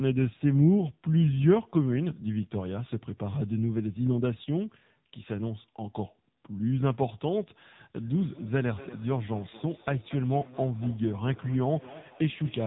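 AMR narrowband mobile codec damage runs through this whole speech clip: nothing above 3.8 kHz survives, and heavy buzzy, synthetic coloration points to a low mode around 6.7 kbps. Feedback echo between two devices appears from 8.0 to 12.67 s: another device's playback re-enters the microphone, returning each phrase roughly a fifth of a second later, thinner and ringing, peaking about 19 dB below the speech.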